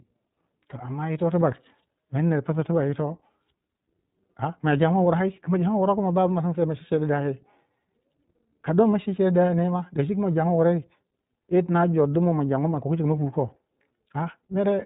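Throughout, the iLBC codec removes everything above 3.8 kHz and adds plainly audible synthetic roughness, fitting independently coded 20 ms frames, unlike a clean low-pass cut.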